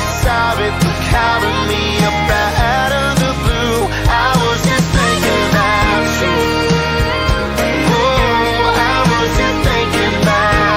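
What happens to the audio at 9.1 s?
At 9.1 s the DECT cordless phone buzz is present, as it is for the whole clip rather than as an isolated event. A nearby DECT handset or base transmits a brief radio burst every 10 ms, and the audio circuitry rectifies that RF, turning the burst train into a 100 Hz waveform rich in harmonics. The result is a thin, steady, rasping buzz sitting roughly 30 dB below the wanted sound.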